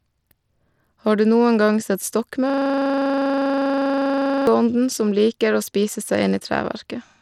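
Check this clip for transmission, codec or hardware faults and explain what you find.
Two problems turn up. Throughout the speech there's plainly audible codec damage, likely from Bluetooth SBC compression: coarse sub-band quantisation thins the treble and adds grit, which fits a low bitrate around 96 kbps.

From 2.50 to 4.47 s, between "du noen gang sett" and "som liker", there's a system hang loop: the system froze while the hardware replayed one 40 ms buffer, producing a steady 25 Hz buzz.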